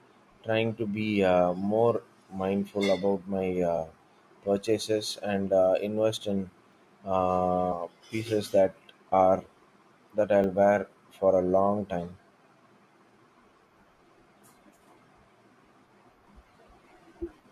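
A speech recording with two tiny clicks and one brief squawk. The clicks land at 6.73 s, right after "and uh invest in", and at 10.44 s. Each is a hard, momentary tick rather than an audible stutter, because the repeated piece is only about 1.3 ms long, which fits a 64-sample buffer. This is a repeated buffer: fresh audio failed to reach the output in time, so the device played its last buffer once more. The sharp joins at each end of that repeat make the click, and roughly a millisecond and a half of the real signal is pushed aside. At 14.86 s a short chirp-like blip breaks through, the mark of damaged data in a compressed stream. Corrupt bytes there threw the decoder off, so it misread the affected frame and had to resynchronise on the next valid header, producing that brief burst of garbled sound.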